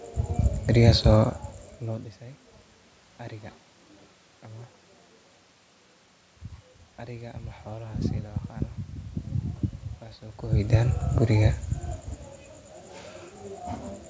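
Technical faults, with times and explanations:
No technical faults are present in this recording.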